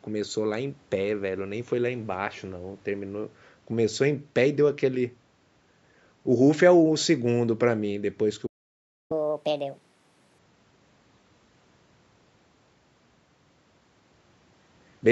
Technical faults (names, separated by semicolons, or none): playback stall; catch-up at higher speed